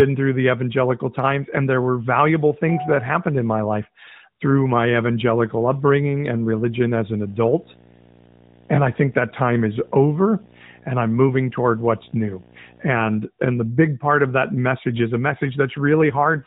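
From 4.91 to 12.91 s, just after "in my life through", a video or display buzz appears: a screen or video cable is leaking its scanning signal into the audio path. The result is a steady buzz at the 59.94 Hz field rate with a harsh hash riding above it, sitting about 20 dB below the speech, plus a whine at the 15.7 kHz line rate.

In the last half second, from 16.02 s to the end at 16.46 s, there is an AMR rate drop. The mobile link weakens, and the network pushes the AMR narrowband codec down to a leaner mode so more of each frame goes to error protection. The sound suggests a step from the 12.2 kbps mode to about 5.9 kbps. The voice keeps the same telephone bandwidth and never cuts out, but it turns audibly rougher and buzzier, with a more synthetic, vocoded edge.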